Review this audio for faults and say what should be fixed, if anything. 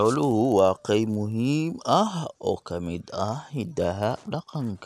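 A resampler restarted on every block runs through the whole speech clip. The 48 kHz to 24 kHz conversion treated each 10 ms block in isolation, leaving an edge error every block and a 100 Hz buzz. Unlike mains hum, it vanishes in pauses. Keep the resampler's filter state running across blocks.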